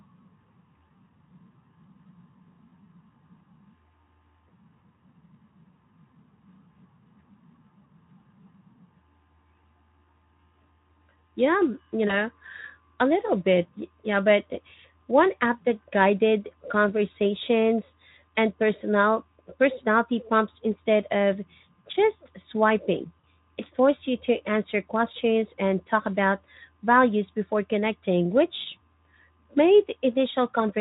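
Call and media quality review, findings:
VoIP packet loss concealed by the speech codec: brief buzzy, smeared dropouts at 12.07–12.18 s and 23.19–23.24 s, fitting one and two lost 20 ms frames. Decoder extrapolates last pitch and filter with falling gain, so distortion persists past the gap against light Speex coding texture.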